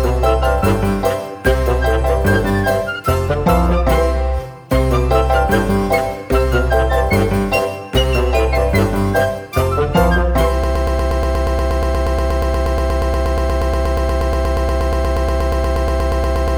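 At 10.64 s the audio locks into a broken-record loop. A fragment of about 119 ms repeats exactly, back to back, roughly fifty times, until the clip ends at 16.58 s. It sounds like a rapid stutter with no forward motion. The likely cause is a stalled player, encoder or stream that kept resending the last piece it held. Everything that should have played after 10.64 s is lost.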